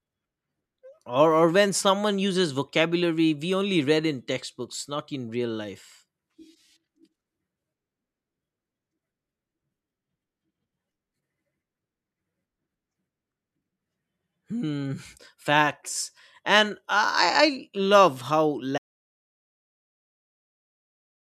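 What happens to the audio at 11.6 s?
Nothing goes wrong at 11.6 s; the speech carries on intact through that moment, with no dropout, click, glitch or other fault to be heard there.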